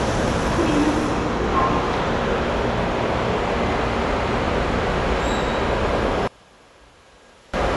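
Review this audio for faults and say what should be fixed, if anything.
Across the whole clip the sound is dull and muffled, with nothing above 11.5 kHz and a rough, fluttering noise clinging to tonal parts. This is likely Dolby Digital compression at a starved rate, which fits roughly 64 kbps: the encoder trims the top band and leaves many frequency lines without detail bits, so the decoder fills them with noise. Encode at a higher bitrate, or keep an uncompressed master for the final export.

From 6.27 to 7.54 s the sound collapses in mono, dropping about 29 dB to a faint residue. The likely cause is one channel inverted: with one side's polarity reversed, everything shared between left and right cancels when they are summed, leaving only their small difference. Check channel polarity with a correlation meter and flip the affected channel back before mixing down.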